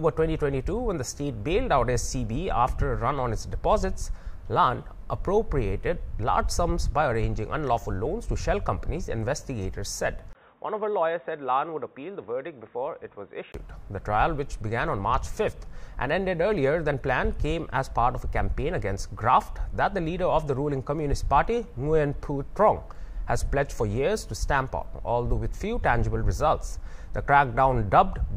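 From 10.33 to 13.54 s the sound turns dull, boxy and a little quieter, with nothing above 3.8 kHz and a brief dropout at 10.33 s, likely an input switched to a poorer device.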